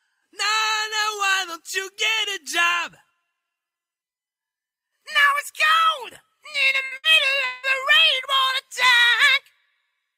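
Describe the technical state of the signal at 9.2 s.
At 9.2 s the signal is intact, with no dropout, clipping, glitch or other technical fault audible at that point.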